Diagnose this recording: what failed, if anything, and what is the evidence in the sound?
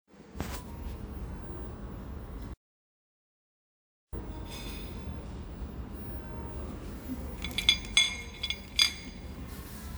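Audio dropout to silence from 2.54 s to 4.13 s, with about 1.59 s of material lost. The sound cuts off abruptly mid-flow and returns just as suddenly, and the gap between is silent with no room tone or noise floor at all. That points upstream of the recorder: the input signal was likely interrupted at the capture stage, by a device disconnecting, a failed link or a momentary mute, while recording carried on writing silence.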